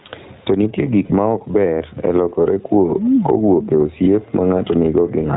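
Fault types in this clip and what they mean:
gain pumping: The gain ducks by roughly 15 dB under each loud syllable, likely from excessive input gain and a fast limiter; the waveform envelope looks flattened and breathing.
iLBC codec: Narrowband VoIP coding leaves the speech audibly rough and synthetic, with the spectrogram showing nothing above 4 kHz, consistent with iLBC's 20 ms frame mode.
lost iLBC frames: From 1.04 to 1.12 s, just before "ma ok ber e", a buzzy held vowel replaces about 60 ms; the spectrogram shows repeated smeared pitch harmonics, then the voice is right again almost at once.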